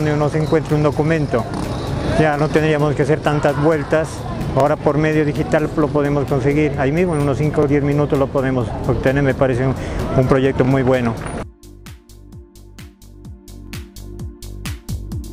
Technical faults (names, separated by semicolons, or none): overlapping chunks